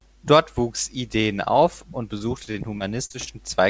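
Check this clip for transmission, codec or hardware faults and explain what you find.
The speech carries one transmission fault: repeated packet loss (robotic sound) from 2.18 to 3.31 s, just after "auf und". Audio packets kept failing to arrive, and each hole, the longest about 40 ms, was patched by extending the preceding sound. Roughly a sixth of that stretch is filled-in sound. The result is choppy, with pieces missing. What sets it apart from a single dropout is the rapid succession of short patched gaps rather than one isolated break. The audio carries nothing above 8 kHz, which fits a wideband call codec such as G.722.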